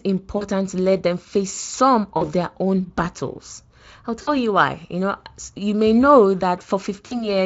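VoIP packet loss concealed by the speech codec hits this speech clip at 0.37–0.46 s (before "to let them face"), 2.17–2.29 s (after "let them face some"), 4.21–4.30 s (before "you why") and 7.05–7.29 s, where 40 to 60 ms of audio went missing and the decoder stretched its last pitch and filter into a fading buzzy tone or coloured noise, leaving the voice weak or distorted for tens of milliseconds or more after packets resume.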